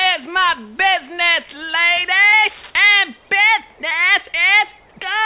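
No technical faults can be heard; the audio carries the band-limited character of a telephone-grade call path, with nothing above about 4 kHz, which fits a narrowband codec such as G.711 mu-law.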